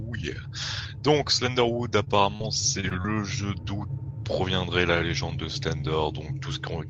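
Short concealed packet loss hits at 2.04, 2.36, 2.81, 2.89 and 3.02 s. Each time about 20 ms of audio arrived too late, so the receiver stretched the preceding sound over the gap. You hear quick smears or wobbles, with the top end stopping near 12 kHz.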